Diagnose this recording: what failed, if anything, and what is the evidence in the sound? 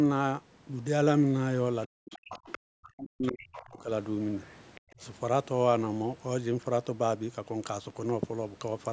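Speech suppressed in double talk, at the call-processing stage. The talker's level collapses by around 40 dB from 1.87 to 2.4 s and from 2.86 to 3.9 s, and by around 20 dB from 4.93 to 5.02 s. The echo canceller likely treated overlapping far-end activity as echo and attenuated both.

The other side's voice is leaking through, also at the call-processing stage. A faint second voice surfaces from 2.1 to 2.58 s, 3.53 to 3.64 s, 4.48 to 4.52 s and 4.75 to 4.81 s, roughly 15 to 30 dB below the talker. This is likely residual loudspeaker echo that cancellation missed.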